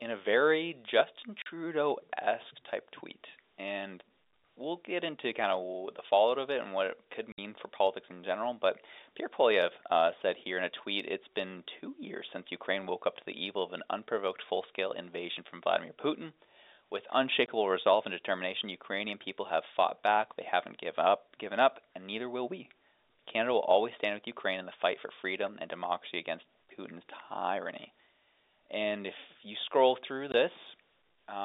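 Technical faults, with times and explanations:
1.42–1.46 s, 7.32–7.38 s, 17.46–17.48 s, 30.32–30.34 s: packet loss filled with silence. The speech drops out for 40, 60, 20 and 20 ms, which fits lost 20 ms packets. Each gap starts and ends abruptly.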